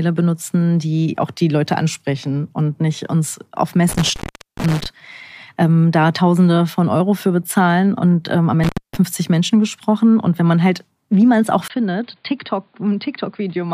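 Intermittent contact at 3.89 s, after "und nicht uns auf", and at 8.63 s, after "ähm am": a loose connection opens for about 0.43 s and then 0.25 s, cutting the speech out with crackle at each edge.

Input switched to a poorer device at 11.68 s, after "wie man es auch": a 20 ms silence, then nothing above 4.9 kHz, a level drop of roughly 5 dB and new background noise, likely a changed microphone.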